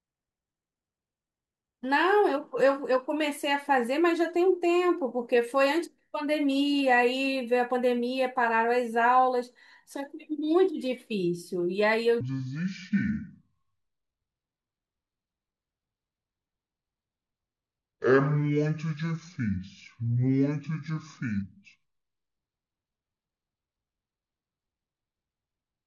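From 12.21 s to the end at 25.87 s, the speech plays as a section at the wrong speed, running at 0.572 times its recorded rate. Pitch and tempo fall together, by about ten semitones, so the talker turns deep, slow and drawn-out, most likely because this part was played or resampled against the wrong clock. On a spectrogram, harmonics and formants drop and crowd lower from 12.21 s onward, while each waveform feature stretches to nearly twice its length.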